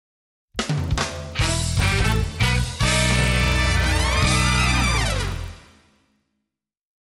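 A steady ticking runs through the whole clip at 25 per second, one tick every 40 ms, riding on the sound. It comes from a resampler restarted on every block: the 24 kHz to 48 kHz conversion treated each block alone, misjudging every edge.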